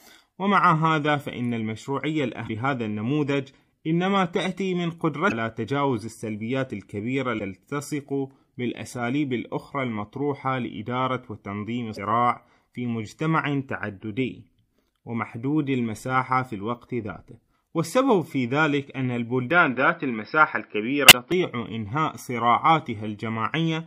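A speech recording with two kinds of technical fault. Damaged data in the compressed stream corrupts the frames at 2.44–2.50, 5.27–5.32, 7.36–7.41, 11.93–11.98 and 21.07–21.12 s. Each time the decoder loses sync and hunts for the next valid frame header, producing a brief chirp or blip of roughly 55 ms. From 19.51 to 21.32 s the input was likely switched to a poorer device. The sound turns dull, with nothing above 5.4 kHz, and its level shifts by about 5 dB. A different background noise, about 50 dB below the speech, comes in with no gap at the switch. The last blip falls inside this stretch.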